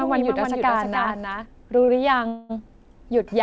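A doubled audio track runs from the very start of the speech until 1.46 s. A second, full-band copy trails the original by roughly 300 ms at about 5 dB lower, with no reverb or room colour. It is likely an out-of-step second capture path, and it stops abruptly at 1.46 s.

A short stall from a late packet follows at 1.85 to 1.90 s. The jitter buffer briefly ran dry, so the receiver held the last sound for about 24 ms until the packet arrived. Nothing is lost, but the sound drags slightly with a faint buzz or dip.

A call audio freeze lasts from 2.28 to 2.51 s. The receiver stretched the final sound into a fading buzz or hiss for about 214 ms, never reaching silence, then resumed where it left off. This is likely packets held up in transit draining the jitter buffer, inserting a gap rather than dropping audio. Throughout, the band stops at 8 kHz, which fits a G.722 wideband call codec at around 64 kbps.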